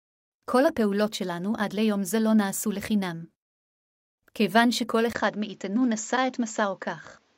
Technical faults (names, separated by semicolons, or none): input switched to a poorer device